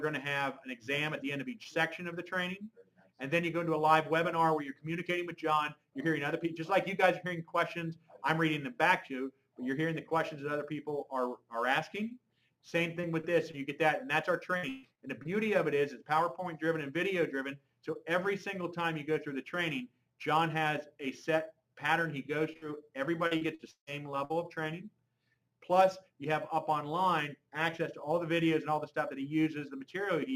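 Short concealed packet loss appears at 13.01, 13.21 and 13.51 s and again around 22.53 s. Each time about 20 ms of audio failed to arrive, and the receiver extended the preceding sound for a similar span before blending back in, giving a brief smear or wobble.

From 14.57 to 15.27 s there is repeated packet loss, with robotic sound. Four gaps total 240 ms missing, the longest 140 ms, and about a third of the stretch is synthesized fill, so it sounds choppy with pieces absent.

Inside the 22.53 s event, a burst of packet loss from 22.57 to 22.64 s bridges 40 ms of missing audio with 48 ms of continued, fading sound. The audio then resumes later in the material.

From 23.27 to 23.89 s a second stretch of repeated packet loss has four gaps totalling 280 ms, the longest 158 ms. Nearly half the stretch is concealment, producing the same choppy, patched sound.

At 24.25 to 24.32 s a final burst of packet loss replaces 60 ms of audio with 50 ms of continued sound that decays. 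The part in between is lost when playback resumes.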